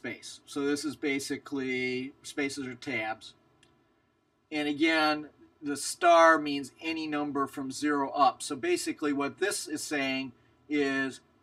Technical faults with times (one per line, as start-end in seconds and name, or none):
0.00-11.43 channel delay (comb filtering)